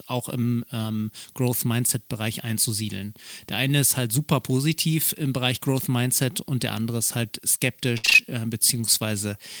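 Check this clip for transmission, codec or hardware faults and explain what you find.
Yes, there's one transmission fault, right near the end. Between 7.97 and 8.19 s there's repeated packet loss (robotic sound). It sounds like about five quick dropouts in a row, the longest around 62 ms. Each hole gets filled by carrying the last bit of speech forward, so more than half of that stretch is patched-over filler. It comes out choppy, with chunks missing.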